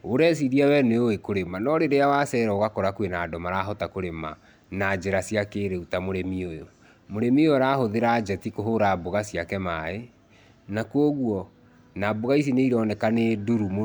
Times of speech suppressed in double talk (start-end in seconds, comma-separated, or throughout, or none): none